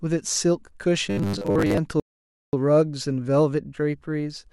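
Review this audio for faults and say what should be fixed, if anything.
From 1.11 to 1.78 s the speech turns into a rigid 100 Hz metallic buzz, robotic sound likely from repeating 10 ms buffers while most real audio is skipped. Unlike a plain pitch shift, it still roughly follows the speech. Keeping audio delivery ahead of playback prevents it.

From 2.00 to 2.53 s a rebuffering stall cuts to silence for about 0.53 s, then resumes exactly where it stopped. Unlike a dropout, nothing is lost. A larger playback buffer prevents it.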